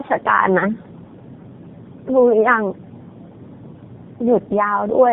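Speech, with tandem speech coding running the whole way through: it sounds like two passes of narrowband AMR-style coding at about 7.95 kbit/s with a G.711 hop between them. Each coder re-chews the last one's damage, so it's rough, warbly and muffled, with nothing above 3.6 kHz.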